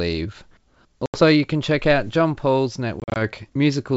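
Packet loss on an ADPCM call strikes at 1.06 to 1.20 s, a hard-edged 80 ms hole, about four packets, before "you can check out", then at 3.00 to 3.17 s, where 100 ms drops out in gaps of up to 40 ms. Each time, silence fills the gap, and the decoder's predictor and step size lose step with the sender's, so the speech resumes mistuned before settling.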